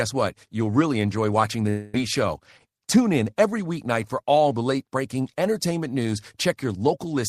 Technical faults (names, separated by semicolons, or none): long network dropout